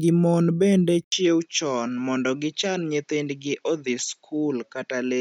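Input switched to a poorer device at 1.04 s in this speech, after "gi mon bende": an 80 ms gap, then nothing above 7.6 kHz, likely from a different microphone.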